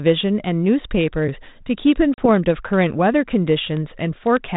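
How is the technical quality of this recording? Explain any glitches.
The recording, G.726 ADPCM audio at 32 kbit/s with light coding noise and nothing above 4 kHz, has one glitch. At 2.14 s, packet loss on the ADPCM call leaves a hard-edged silent gap of about 40 ms, a few packets' worth. The decoder's adaptive predictor and step size fall out of step with the sender's, so speech resumes slightly distorted, settling by about 2.26 s.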